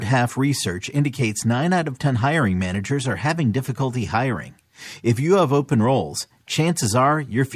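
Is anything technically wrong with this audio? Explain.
No, nothing in this speech recording points to a technical fault.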